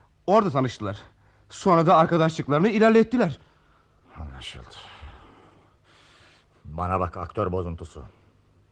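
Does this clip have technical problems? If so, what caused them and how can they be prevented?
Yes. Clock drift between sender and receiver runs throughout: the sender's clock is about 3% slow, so the jitter buffer keeps draining and the receiver must pad the stream. Locking both ends to a common clock, or using adaptive resampling, prevents this.

Repeated timing corrections occur from 0.14 to 8.58 s: small pieces are repeated unevenly, slowing the sound to 97% speed and adding roughly a fifth of a second. Smooth resampling-based drift compensation instead of cut-and-repeat edits would prevent these.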